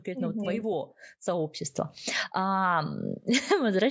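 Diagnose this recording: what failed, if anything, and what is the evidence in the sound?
The failure is automatic gain rising in the call processing stage. From 0.05 to 1.61 s the level climbs by about 5 dB, and from 2.33 s to the end it climbs again by about 6 dB. The speech and the background noise swell together each time, which rules out a change at the source. The AGC judged the input too quiet and ramped its gain up over more than a second. The band-limiting, with nothing above 8 kHz, is the call's normal microphone processing.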